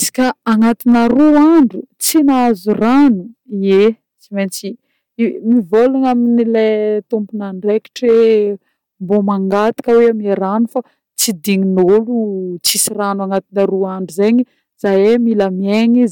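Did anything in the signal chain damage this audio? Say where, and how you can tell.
Yes. Hard clipping runs through the whole speech clip: the signal is driven about 7 dB past what a converter or sample-format stage can hold, so a few percent of samples are squared off flat, adding high harmonics heard as crackle on the peaks.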